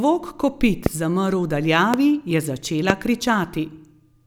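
Three loud pops, at 0.86–0.88, 1.94–1.96 and 2.90–2.92 s, each a single sharp spike roughly 20 dB above the speech, likely from an electrical voltage transient.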